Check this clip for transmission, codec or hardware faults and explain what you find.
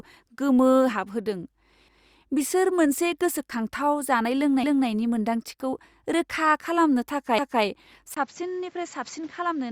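Two faults are audible in this speech: a stutter at regular intervals from overlapping chunks, and a change in tone near the end from the input switching to a poorer device.

Overlapping chunks: at 1.88–2.13 s, 4.63–4.88 s and 7.38–7.63 s, a 250 ms stretch plays twice. Each 2.5 s chunk begins before the previous one has finished, so the join replays its tail. The result is a short stutter. Packet loss would leave gaps, but here sound is repeated, and the repeats come at an even 2.75 s spacing.

Input switched to a poorer device: from 8.15 s to the end, after a 20 ms silence, the sound turns duller and drops a few decibels. Nothing remains above 7.6 kHz, and new background noise sits around 30 dB below the speech. The likely cause is the input moving to another microphone or a headset call profile. A simple EQ or filter change would not bring the brief gap, a new noise floor and a level drop all at once.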